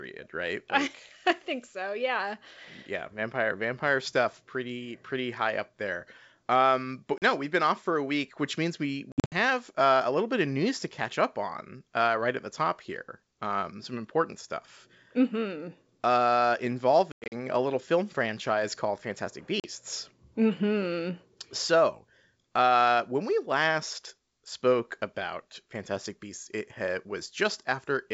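Hard-edged silent holes cut the speech at 7.18 to 7.23 s, 9.12 to 9.34 s, 17.12 to 17.33 s and 19.60 to 19.65 s, each followed by slightly distorted speech. This is packet loss on an ADPCM call. Forty milliseconds drop in each short hole, while the two longer stretches lose 160 ms scattered across 200 ms. The decoder's predictor and step size then briefly mistrack the sender's.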